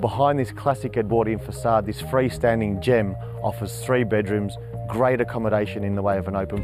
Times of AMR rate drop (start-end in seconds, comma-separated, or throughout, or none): none